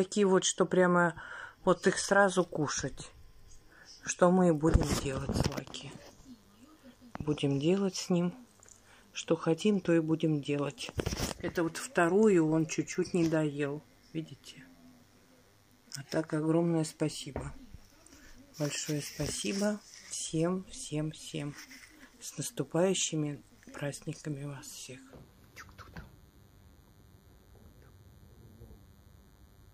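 From 5.35 s to the end, a DECT cordless phone buzz sits under the sound: rectified 10 ms radio bursts producing a thin, harmonic-rich 100 Hz buzz, roughly 40 dB below the signal.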